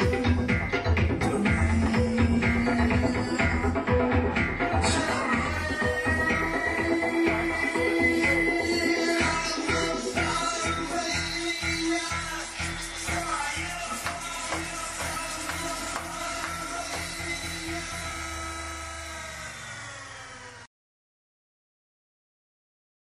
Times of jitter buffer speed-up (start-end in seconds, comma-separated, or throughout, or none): none